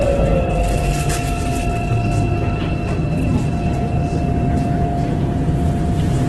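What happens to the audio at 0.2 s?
At 0.2 s the audio is under heavy Opus compression, likely from its music (CELT) mode at a very low rate, which fits a bitrate around 12 kbps. With bits scarce, the encoder preserves each band's energy but fills the detail with folded copies of lower bands or noise, so tones come out rough, grainy and noisy. The bandwidth is also trimmed, leaving nothing above 12.1 kHz, and this continues through the entire clip.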